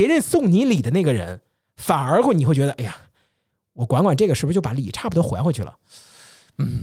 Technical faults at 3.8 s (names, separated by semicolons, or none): none